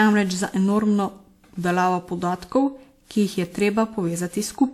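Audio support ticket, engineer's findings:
Generation loss throughout: swirly, hollow speech, smeared attacks. Spectrogram: stacked holes, blurred onsets. Likely repeated WMA re-encoding, about seven passes, consistent with 96 kbit/s.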